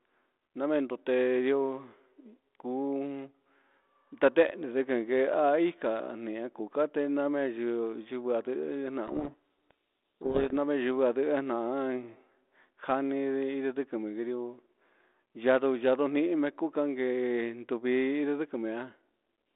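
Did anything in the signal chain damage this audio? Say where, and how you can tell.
Yes. From 9.06 to 10.57 s the speech is buried under harsh, grinding distortion, then clears abruptly. This is a codec payload misread at the codec stage: the G.726 code words arrive in the wrong bit order, so the ADPCM decoder reconstructs wrong differences until the packing matches again.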